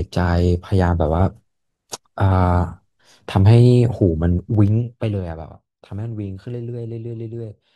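Between 4.48 and 5.42 s there's zipper noise. The level comes down by around 15 dB in unsmoothed 2 dB jumps, roughly seven a second. Each jump clicks, so instead of sliding smoothly, the fade zips audibly over the speech.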